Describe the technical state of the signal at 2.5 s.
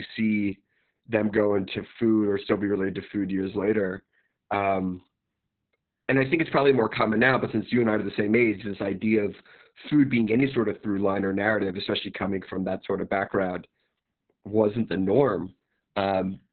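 At 2.5 s the speech carries Opus voice compression, present across the whole clip rather than at that moment alone. The codec is running its SILK linear-prediction mode in narrowband, so nothing survives above about 4.3 kHz, and the excitation is quantised very coarsely, which points to a bitrate around 6 kbps. The result is muffled, hoarse and faintly robotic. Unlike a plain low-pass filter, which only dulls the sound, the roughness here comes from the crude modelling itself.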